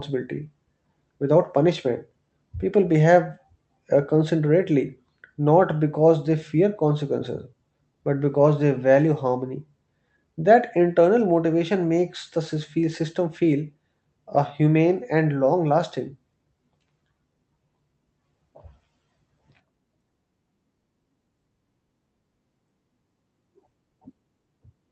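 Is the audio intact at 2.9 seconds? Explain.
Yes, the audio is intact at 2.9 seconds, with no fault at that moment.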